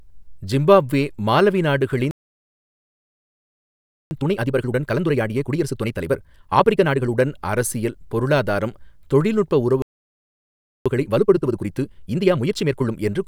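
A speech recording with two playback stalls. After "ஜிம்பாப்வே மாலவி" the sound goes silent from 2.11 to 4.11 s, and again from 9.82 to 10.86 s. The likely cause is a player starved of data. Each stall is followed by time-compressed catch-up, from 4.11 to 7.11 s and from 10.86 to 12.92 s, the second just after "அரசியல் பொருளாதாரம் தொழில்நுட்ப". Speech runs at 1.5 times normal speed but keeps its natural pitch, unlike a fast-forward that would raise the pitch.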